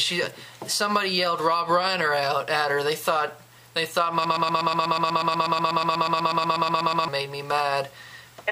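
At 4.25 s the audio locks into a broken-record loop that runs until 7.08 s: a fragment about 122 ms long repeats exactly, back to back, 23 times, and whatever should have played across those seconds never arrives. The likely cause is a stall in the player, encoder or stream that kept resending the last piece it held. Unlike an echo, the copies don't decay, and unlike a dropout, sound never goes silent.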